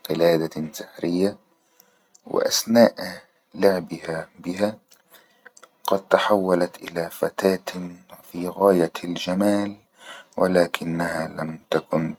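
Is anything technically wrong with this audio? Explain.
No, there's nothing technically wrong here that I can hear; the speech comes through without any glitches, dropouts or distortion to flag.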